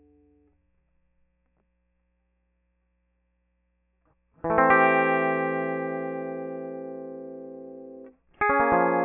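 No technical faults can be heard anywhere in this music recording. There is no event in it that calls for a time mark or a repair.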